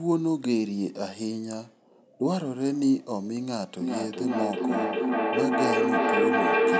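Speech, with a feedback echo between two devices from 3.8 s to the end. Each phrase returns roughly every 0.4 s, thinner and more ringing each pass. The repeats build instead of fading, peaking about 3 dB above the speech. Two devices in the same room share the call. One plays the other's audio, and that microphone picks it up again. Neither echo canceller removes sound from the other device. The call microphone processing caps the audio at 8 kHz.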